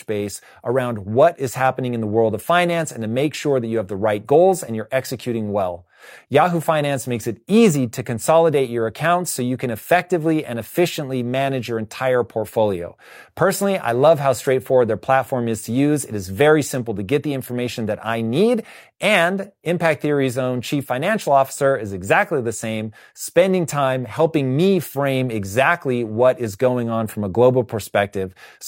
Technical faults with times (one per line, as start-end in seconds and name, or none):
none